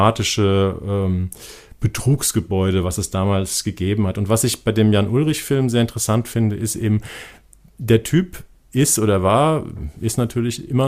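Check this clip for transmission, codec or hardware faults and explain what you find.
Listening through the speech, nothing points to a transmission, codec or hardware problem, and the signal holds steady and continuous throughout.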